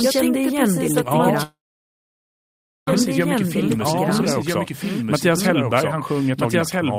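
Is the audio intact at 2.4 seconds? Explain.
No. At 2.4 seconds the sound has stopped: this moment falls inside a call audio freeze running from 1.43 to 2.88 s. The last sound before 1.43 s is stretched into a short fading buzz, then about 1.3 s of silence follows until the speech resumes exactly where it broke off. The likely cause is packets held up in transit, leaving the jitter buffer empty, so the receiver padded the wait. Nothing is lost, but the rest of the clip arrives about 1.44 s late.

The moment is also affected by a doubled audio track that runs through the whole clip. A full-band second copy of the speech, about 5 dB quieter, trails roughly one and a half seconds behind the original. It has no decay or room colour, so it sounds like a clean, out-of-step overlay rather than an echo. The likely cause is the same audio being captured a second time over a slower path.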